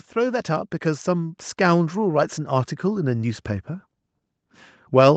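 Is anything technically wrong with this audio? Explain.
Yes. From 0.13 s to 3.51 s there is automatic gain rising. The speech and the background noise swell together, by about 9 dB over roughly three and a half seconds. An automatic gain control judged the input too quiet. It then raised its gain step by step instead of all at once. Because it scales the whole signal, the noise floor climbs with the speech. The audio sits within a band ending near 8 kHz, as expected from a call path.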